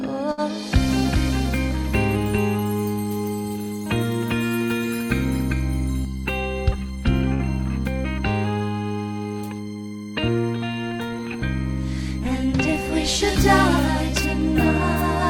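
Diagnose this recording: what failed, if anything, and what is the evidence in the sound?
Two bursts of packet loss point to the network stage. The first runs from 0.31 to 0.40 s, the second from 7.33 to 7.42 s. In each, the last sound is carried on for about 60 ms and fades as a held buzz or hiss. The audio then jumps ahead, with about 60 ms skipped. The receiver had nothing to play, so it concealed the gap by extending what it last had.

A doubled audio track runs from 0.91 to 6.05 s. A second, full-band copy trails the original by roughly 0.4 s, at about 5 dB lower. It has no decay or room colour. It starts and stops abruptly at those times. The cause is likely at the call-processing or capture stage, with the same signal picked up again through a slower path and mixed back in at a fixed offset.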